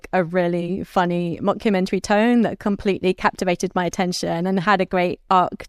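Nothing stands out as a technical fault in this bit of speech; it just runs along without any glitch worth pointing to.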